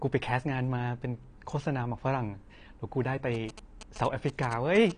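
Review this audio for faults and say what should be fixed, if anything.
The speech sounds dull and smeared throughout, with nothing above 10 kHz and an audible warbling texture on sustained sounds and sibilants. This is likely AAC compression at a low bitrate, around 32 kbps. The encoder cut the high band and coarsely quantised the remaining spectrum. To prevent it, encode at a higher bitrate or deliver the audio in a lossless format.

GSM signalling bursts run from 3.34 s to 4.92 s as a galloping pattern of short buzzes at 217 Hz, sitting roughly 15 dB below the speech. A nearby 2G phone exchanging signalling with its network emitted these radio bursts, and the audio circuit rectified them into sound. To prevent it, keep mobile phones away from the microphone, cables and preamp, or use shielded, balanced connections.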